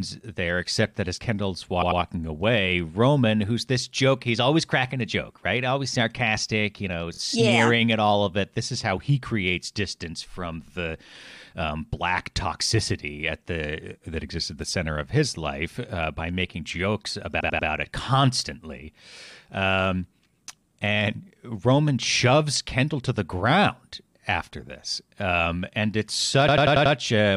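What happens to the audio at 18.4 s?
At 18.4 s the speech carries on intact, with no dropout, click, distortion or other fault to be heard.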